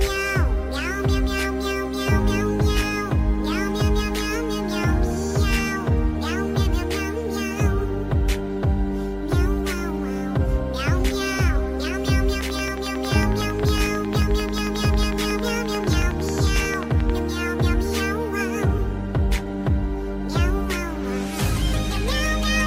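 From 12.41 to 17.11 s there's a train of clicks, a steady ticking at 11.1 per second, around fifty in all, poking well above the sound. Near-identical pulses at such a regular pace are likely interference from nearby gear or a faulty connection or power supply.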